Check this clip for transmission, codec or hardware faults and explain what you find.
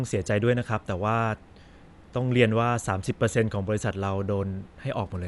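One codec fault runs through the whole speech recording, most likely Dolby Digital compression. It is plainly audible from start to finish: nothing survives above about 11.5 kHz, which fits a starved bitrate near 64 kbps. The encoder narrows the band and leaves many frequency lines without mantissa bits, so the decoder fills them with dither noise. The result is dull, with a rough, fluttering grain around voiced tones. A plain low-pass filter would sound clean rather than grainy.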